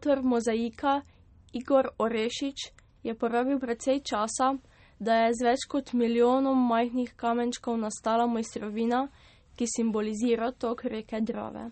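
Speech runs the whole way through with plainly audible MP3 compression damage, likely from encoding at a low bitrate; the sound fits roughly 32 kbps. Nothing is present above 8.4 kHz, a hard treble ceiling where the encoder has discarded the top band. Below that, weak spectral components drop in and out between frames, giving the voice a watery, swirling texture, with metallic chirping on sibilants and smeared consonant onsets.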